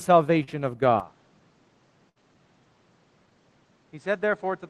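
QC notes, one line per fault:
0.43–0.49 s, short concealed packet loss. About 40 ms of audio never arrived in time. The receiver covered the hole with roughly 39 ms of invented sound, carrying the last sound forward before blending back into the real signal. The result is a brief smear or wobble. Whatever fell inside that window is gone, so a short, sharp sound there could simply disappear.
1.00–4.70 s, input switched to a poorer device. From 1.00 s to the end, the sound turns duller and narrower, with nothing left above 8.5 kHz. There is no silence at the change. The level drops by roughly 5 dB, and a new background noise sits around 35 dB under the signal. The likely cause is a change of input to a lesser microphone or a headset's call profile, which carries its own tone, level and noise floor.
2.09–2.18 s, burst of packet loss. About 60 ms of consecutive audio was lost or arrived too late to play. 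The receiver filled roughly 63 ms by extending the last sound and letting it fade. That gap is long enough to hear as a held buzz or dying hiss rather than a tick. When the real audio resumes, it picks up further along, and the section in between is missing.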